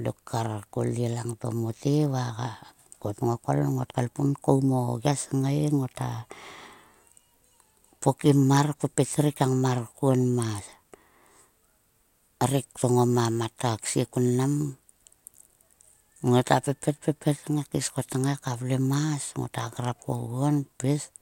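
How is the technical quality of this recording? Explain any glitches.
Nothing in this speech recording stands out as a glitch, so there's honestly nothing here that needs explaining.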